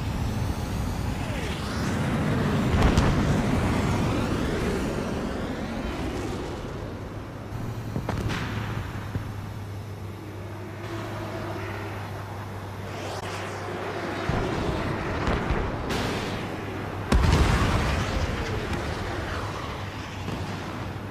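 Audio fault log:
13.20–13.23 s, corrupt frame concealed: a brief span of about 30 ms, consistent with a single damaged AAC frame that the decoder detected and covered rather than playing out as a squeak or click. On a spectrogram it appears as a narrow vertical band of missing or blurred energy across all frequencies.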